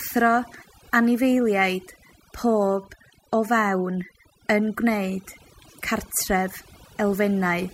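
From start to finish the speech has overdone noise removal. The noise reduction was pushed too hard, so every frequency band that sits close to the estimated noise floor gets pulled way down or switched off, and the quieter parts of the voice get caught along with it. Between phrases the background drops away, with little twinkling specks in it.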